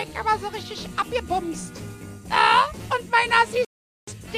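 At 3.65 s the sound cuts abruptly to silence and stays muted until 4.12 s, then resumes further along in the programme rather than where it stopped. This is a digital broadcast dropout. The receiver stopped getting usable frames, either because the signal was lost or because frames failed their error check, so it muted its output. About 0.43 s of programme is missing, which points to roughly ten lost frames.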